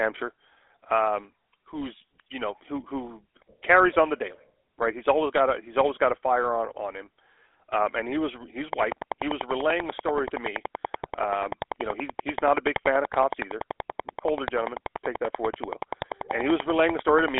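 From the start, the speech carries the sound of the GSM full-rate codec. The coder models the vocal tract and drives it with a sparse, regularly spaced pulse excitation, keeping only part of it. The result is a buzzy, gravelly roughness, and the damage is plainly audible. The band sits roughly between 300 Hz and 3.5 kHz, with nothing above 3.8 kHz. That fits a 13 kbit/s telephone path.

From 8.73 s to 17.39 s, a train of clicks runs over the audio. The pulses come at a steady 10.4 per second, about a hundred in all. They share much the same shape and peak around 15 dB above the signal. They tick through the speech and through the pauses alike. The likely cause is interference from nearby equipment or a struggling interface injecting repeated pulses.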